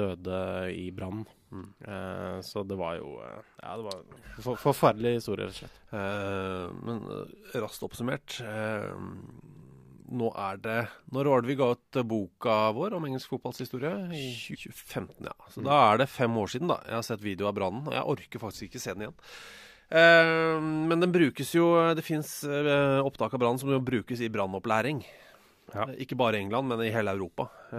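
At 14.54 to 14.56 s the speech jumps abruptly forward with a brief blip, as though a stretch of the talk has been cut out. This is likely a stream segment skipped: one chunk of the segmented stream failed to load, and playback resumed from the next.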